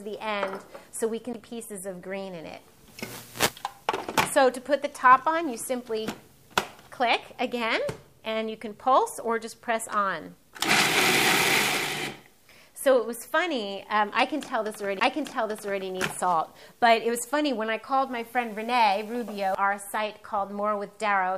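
At 1.33 s, 15.00 s and 19.55 s a CD skip occurs: the laser jumps tracks, the player mutes for roughly 5 to 20 ms with a tick, then resumes elsewhere on the spiral. Unlike a plain dropout, the sound doesn't pick up where it stopped.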